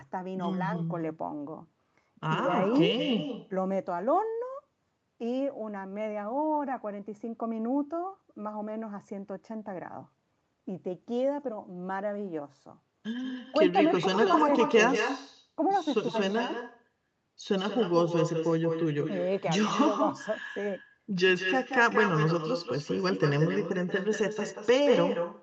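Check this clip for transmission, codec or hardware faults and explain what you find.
One fault runs through the whole recording: echo with no canceller. From start to finish, the speech is trailed by a second copy arriving roughly a fifth of a second later, only about 6 dB quieter and thinner than the original. The far end was playing the call through a loudspeaker, its microphone picked that sound up, and no echo cancellation removed it. The talker's voice therefore returned after the network round trip, shadowing every phrase. Above it, the sound stops at around 8 kHz, as expected for an Opus call path, which is not a fault.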